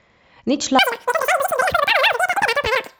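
A speech recording with a wrong sample rate from 0.79 s to the end: playback runs three times too fast, fitting 16 kHz audio played at 48 kHz, so the voice turns hurried and about 19 semitones higher.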